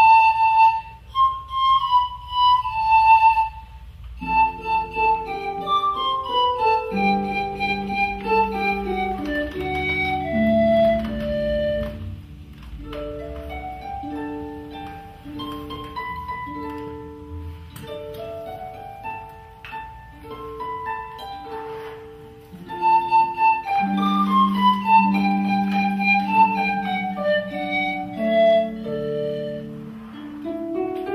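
No technical faults can be heard anywhere in this audio.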